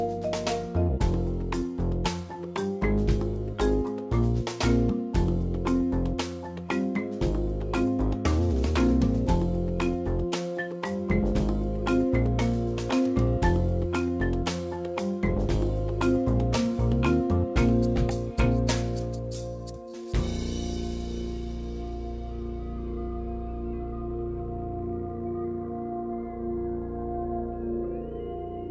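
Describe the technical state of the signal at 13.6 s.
At 13.6 s the signal is intact, with no dropout, glitch or distortion, only the band limit of the WebRTC call path, which leaves nothing above 8 kHz in the G.722 coding.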